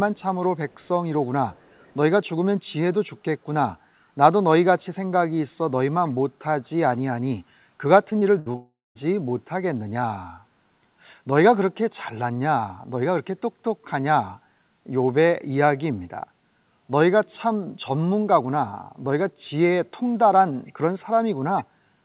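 From 0.16 to 0.23 s, 0.7 to 0.88 s and 1.51 to 1.96 s, a faint delayed copy of the speech trails the original by 430 ms, well below the direct signal. This echo leak is likely from a far-end loudspeaker whose echo canceller let residual pickup return. It recurs briefly at 20.66 to 20.73 s.

Between 8.1 and 8.56 s, repeated packet loss produces choppy speech with pieces missing. Several short holes, the longest about 65 ms, are each patched by extending the preceding sound, and about a quarter of that span is synthetic fill rather than real audio.

The loss continues straight into a long network dropout from 8.56 to 8.97 s, likely caused by packets ceasing to arrive. Concealment stretches the last sound into a fading buzz, which collapses into about 0.22 s of silence before speech resumes with that section gone. All of this sits within the narrow G.711 call band, with nothing above 4 kHz.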